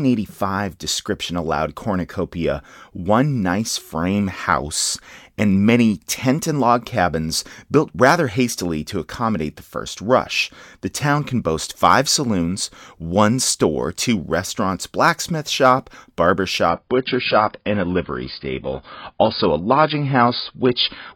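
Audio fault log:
16.69–21.15 s adaptive stream at a lower bitrate: sudden, gapless quality drop; nothing above 5.1 kHz and codec artefacts rise, consistent with a switch to a much lower-bitrate AAC version.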